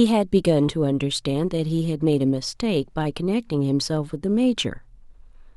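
From 0.11 s to 5.55 s, clock slip clicks form a soft, steady rattle about every 20 ms, likely from unsynchronised device clocks differing by roughly 0.1%, each slip dropping or repeating one sample.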